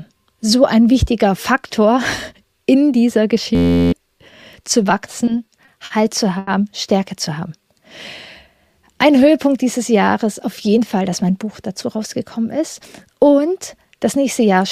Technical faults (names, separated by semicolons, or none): system hang loop; repeated stalls (stutter); short stall from a late packet; jitter buffer speed-up